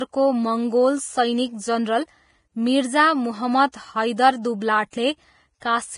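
Vorbis compression runs through the whole clip: nothing remains above 10.5 kHz, and the treble is rendered as coarse grainy hiss with roughened tones, likely from heavy Vorbis coding at a low bitrate, which fits something near 28 kbps.

Pre-echo appears at 3.72 s, from 4.90 to 4.93 s, and at 5.60 s. Quantisation noise spread across each transform block leaks into the quiet gap before a sharp attack, leaving a brief 17 to 26 ms hiss and a smeared onset.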